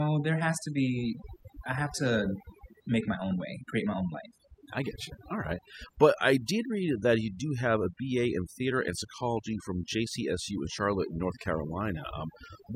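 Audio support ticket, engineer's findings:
Overdone noise removal throughout speech: twinkling specks in near-silent background. Denoiser set too strong, gating bands near noise estimate. Spectrogram: patchy isolated time-frequency dots.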